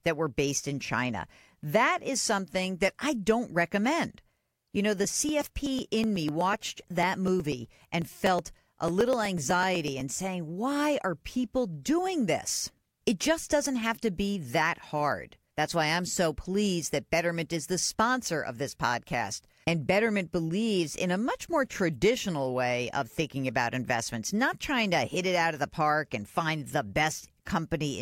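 From 5.04 to 10.13 s, after "know the" and until "saying why are people", periodic USB or driver dropouts skip about a millisecond of speech every 0.124 s, giving some forty ticks. Their strict, metronome-like spacing sets them apart from random clicks.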